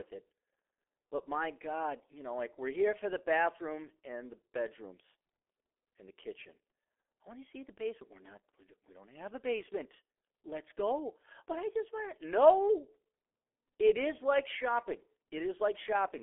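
From start to finish the speech carries G.723.1 codec damage, and it is heavy. Nothing is present above about 3.7 kHz, and the band sits roughly between 300 Hz and 3.4 kHz, so the sound is thin and muffled. The coarse 30 ms frames and slowly updated voice model, which fit a rate near 6 kbit/s, leave the voice hoarse and smear consonants into one another.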